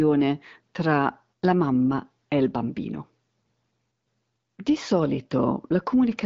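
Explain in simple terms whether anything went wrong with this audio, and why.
Nothing went wrong here: the speech simply passes through an HD Voice phone-call codec (AMR wideband) set at a rate where it stays clear, and that's exactly how this kind of call audio is meant to sound.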